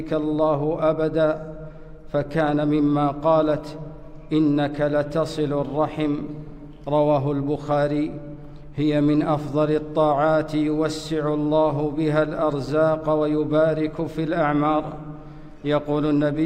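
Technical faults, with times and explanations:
Nothing here calls for a note; the audio just runs along without a technical hitch anywhere.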